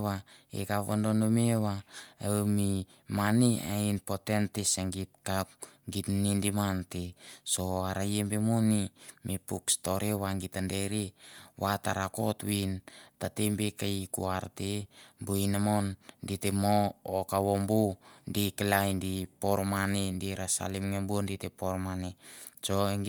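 Throughout the speech, the upper frequencies carry a plainly audible breathy, grainy texture, even though content extends to 20.1 kHz. The likely cause is Bluetooth LC3 compression filling the thinned upper spectrum with noise, which fits around 48 kbps with 10 ms frames.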